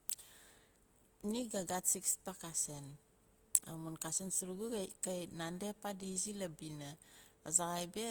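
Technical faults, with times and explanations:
Throughout, Opus compression: the speech sounds rough and grainy rather than swirly, with plainly audible codec damage spread across the spectrum. The likely cause is Opus running in its music (CELT) mode at a bitrate low enough to starve the bands, which fits roughly 24 kbps. When bits run short, the encoder preserves each band's energy but fills the detail with folded or noise-like content, so tonal parts of the voice turn noisy. Bandwidth stays full, reaching about 20.2 kHz.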